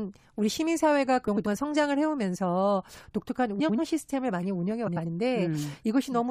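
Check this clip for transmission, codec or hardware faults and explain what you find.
The speech shows one fault, three times. Frames out of order at 1.27–1.47 s, 3.59–3.79 s and 4.87–5.06 s: two neighbouring blocks of about 93 ms each, consistent with runs of four frames, were decoded in swapped order. Each stretch plays its halves exchanged, giving a garbled flutter, while total timing stays intact.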